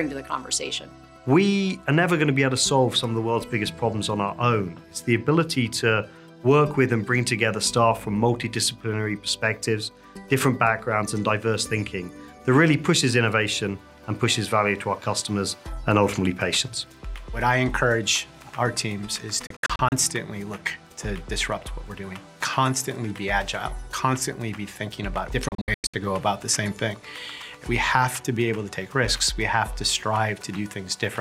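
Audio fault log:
19.47–19.92 s and 25.48–25.94 s, digital broadcast dropout: The sound breaks into short silent holes across about 0.45 s each time. The holes total 192 ms at first, then 288 ms, with runs up to 64 and 96 ms. The steps fit 32 ms frames failing and the receiver muting with a 3 ms fade.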